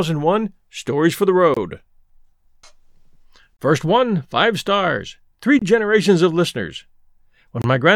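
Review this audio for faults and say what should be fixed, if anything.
Gap between chunks: 25 ms holes at 1.54–1.57 s (after "for the"), 3.57–3.59 s, 5.59–5.62 s (between "one five stars three" and "generations of listeners") and 7.62–7.64 s, every 2.0 s, where silence is inserted at each chunk join. The waveform shows flat silent stretches with abrupt edges, and the spectrogram shows thin vertical blank bands. To prevent it, strip codec padding and schedule each chunk to start exactly where the previous one ends.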